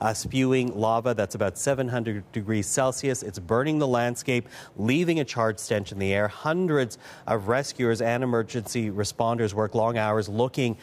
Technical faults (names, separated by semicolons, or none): none